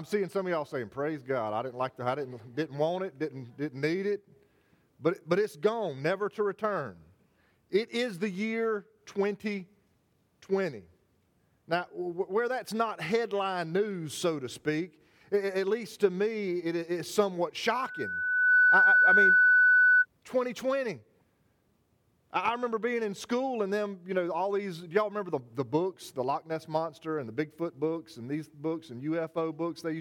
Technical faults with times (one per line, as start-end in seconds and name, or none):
17.67-20.06 loudspeaker feedback squeal